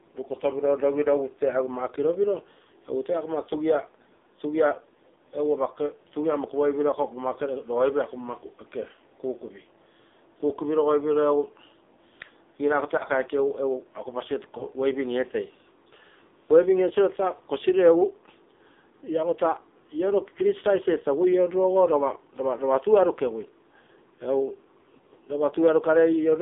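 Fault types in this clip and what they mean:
AMR narrowband mobile codec: This is the old 2G/3G phone speech coder, which rebuilds speech from a vocal-tract model fed by a sparse pulse pattern instead of sending the waveform itself. The whole clip sits in a narrow line band of roughly 250 Hz to 3.7 kHz, so it sounds boxy and thin. The coding damage is heavy, with a buzzy, synthetic edge on the speech, which fits one of the lower AMR modes at around 5.9 kbps.
Lost AMR speech frames: There are two brief hiccups, at 12.98 to 13.04 s and again at 14.58 to 14.64 s. Each lasts about 20 ms, which fits a single dropped frame. When a frame arrives corrupted, the decoder fills the gap by reusing the last good pitch and vocal-tract settings at reduced gain. That shows up here as a quick dip or warble in the speech, and then the signal picks up again.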